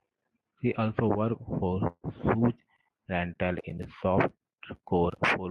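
Right after "also worked for", from 1.87 to 2.06 s, there's a call audio freeze: the last sound smears into a fading buzz before going quiet for about 60 ms. The speech then resumes where it stopped, about 0.16 s late, with nothing lost, likely from delayed packets draining the jitter buffer.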